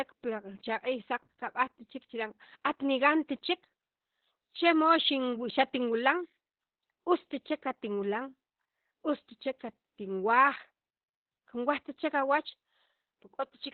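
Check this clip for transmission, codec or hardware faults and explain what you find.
Opus voice compression runs through the whole of this speech clip and is the one fault present. The encoder sits in its SILK linear-prediction mode at narrowband, so nothing above 4.2 kHz survives, and the heavy damage points to a rate near 8 kbps. SILK models the voice as a filter driven by an excitation signal, and at this rate the excitation is coded crudely. The result is muffled, hoarse and faintly robotic speech, with the upper consonant detail gone.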